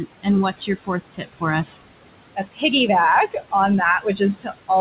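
A noise suppressor is running across the whole clip and pulling down whatever it judges to be steady background by about 21 dB. The room noise, which sits only about 12 dB under the speech, drops away in the gaps and swells back under each phrase, all inside a band that stops at 4 kHz, consistent with a narrowband call codec such as G.711.

The same suppressor also mistakes parts of the speech for noise and turns them down with the background, which is speech cut by the noise suppressor. Between 0.51 and 1.44 s, roughly half a second of sound is dipped by up to about 20 dB. Shorter cuts follow at 2.35 to 2.63 s (about 20 dB), 3.28 to 3.53 s (about 17 dB), 4.0 to 4.21 s (about 14 dB) and 4.38 to 4.7 s (about 13 dB). Soft consonants and word endings there sound swallowed or faint.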